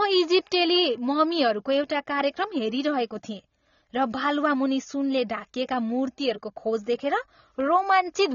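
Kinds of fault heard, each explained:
AAC compression: The speech is band-limited, with nothing above 7 kHz, so consonants and sibilants lose their top end and the whole clip sounds dull. Codec damage is plainly audible throughout: the encoder has discarded or coarsely quantised spectral detail it judged masked, leaving a smeared, warbling texture on sustained sounds. The cut-off and the artefacts are likely the result of AAC-LC encoding at a low bitrate, consistent with roughly 24 kbps.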